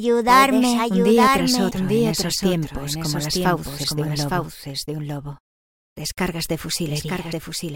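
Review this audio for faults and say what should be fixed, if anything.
Doubled audio track, throughout: a second full-band copy of the sound trails the original by about one second, a few decibels quieter, with no decay or room colour. This is likely a second capture through a slower path or an edit holding two out-of-step copies. Route each source once and mute duplicate monitoring or capture paths before recording or exporting.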